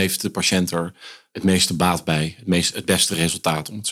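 No technical faults can be heard anywhere in this speech clip. Nothing in the sound points to a fault in how it was captured, processed or delivered.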